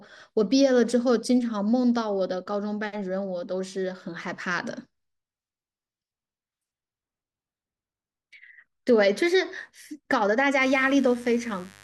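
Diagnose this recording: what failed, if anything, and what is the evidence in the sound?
A steady, raspy mains buzz comes in at 10.61 s and runs to the end of the speech at 11.83 s, sitting roughly 25 dB below the speech level. The fault is in the analogue wiring. Interference on a 50 Hz supply, from a dimmer, a rectifier or a missing shield, is injecting sharp switching spikes twice per mains cycle. Those spikes carry a dense stack of 50 Hz harmonics up into the kilohertz range, which gives the buzz its gritty edge rather than a smooth hum.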